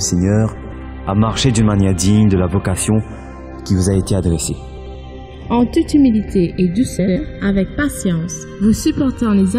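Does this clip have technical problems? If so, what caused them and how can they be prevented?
Yes. Channels drifting apart: inter-channel delay slides throughout, reaching roughly 0.7 ms, which fits clocks about 100 ppm apart. Summed to mono this gives slow flanging, seen as comb notches sweeping across a spectrogram. Prevent it by locking both devices to one word clock.

Frames out of order at 0.55–0.73 s, 4.77–4.95 s and 6.99–7.17 s: two adjacent 85.3 ms blocks, which fits four frames each, play swapped. The result is a garbled flutter. Prevent it with sequence-numbered packets and reordering before decoding.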